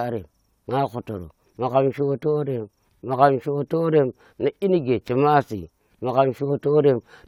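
CD scratch ticks from 0.47 to 1.19 s: four regular, sub-millisecond clicks where a surface blemish exceeded error correction on each disc rotation, leaving patched samples.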